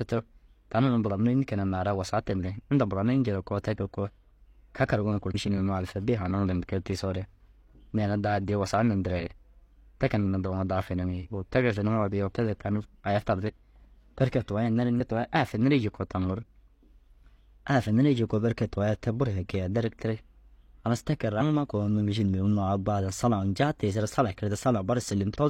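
Compressed frames are skipped at 5.30, 14.96, 21.37 and 25.31 s. The speech jumps ahead roughly 0.3 s, half a second, one frame, then 0.3 s, with 46 ms frames.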